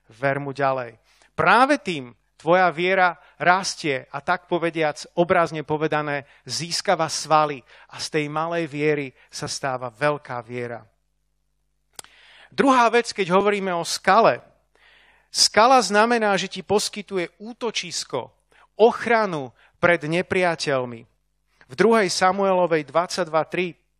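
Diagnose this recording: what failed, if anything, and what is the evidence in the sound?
Overlap between stream segments in playback: overlapping timestamps on 1 s segments trimmed real sound, leaving waveform jumps and thin vertical spectrogram lines at 13.41–13.43 s, before "o skale", and 14.40 s.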